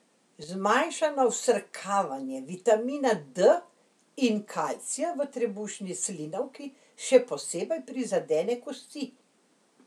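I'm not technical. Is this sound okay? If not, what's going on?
No, there's one brief glitch. From 0.44 to 0.49 seconds the speech suddenly dips in loudness for a split second, then comes straight back. That's most likely one channel dropping out, where one side of the stereo recording briefly went silent.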